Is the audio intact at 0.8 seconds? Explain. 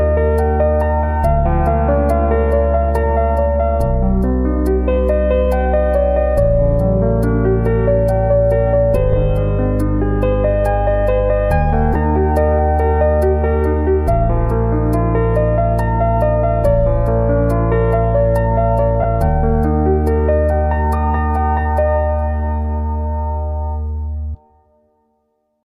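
Yes, the audio is intact at 0.8 seconds, with no fault at that moment.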